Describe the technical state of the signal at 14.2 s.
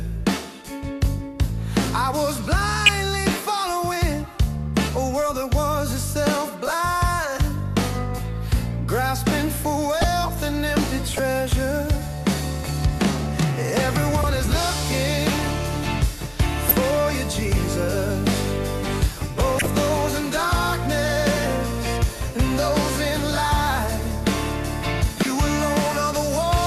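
At 14.2 s there is a corrupt frame decoded. It runs from 14.21 to 14.24 s, about 24 ms. Bits inside a couple of compressed frames were damaged, and the decoder played them anyway. The misread gains and codes put energy at the wrong frequencies for the length of those frames. The result is a short chirp, blip or burst of noise that peaks at roughly -10 dBFS.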